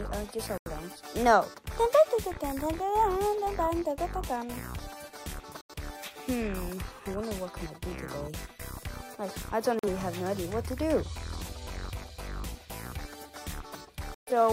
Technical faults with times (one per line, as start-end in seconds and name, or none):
0.58-0.70 digital broadcast dropout
5.61-5.74 digital broadcast dropout
9.79-9.88 digital broadcast dropout
14.14-14.31 digital broadcast dropout